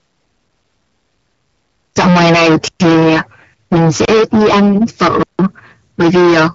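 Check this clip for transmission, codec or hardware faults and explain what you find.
Two faults stand out: heavy hard clipping across the whole clip, and three blocks of digital silence.

The hard clipping runs from start to finish. The signal is driven about 21 dB past what the stage can pass. Roughly a third of the samples hit the ceiling and are cut flat. Those flat tops add harmonics high up the spectrum. The result is a harsh fuzz on every loud stretch of speech, not just crackle on the odd peak.

The blocks of digital silence fall at 2.68 to 2.80 s, 4.05 to 4.08 s and 5.23 to 5.39 s. They last 120 ms, 29 ms and 160 ms. In each, samples were replaced by zeros, likely because the output buffer was not filled in time. The audio drops to dead silence and returns with no fade. The longer two are clear holes in the speech. Underneath, the speech keeps the light coloration of the AMR wideband codec, which fits a rate of around 12.65 kbit/s.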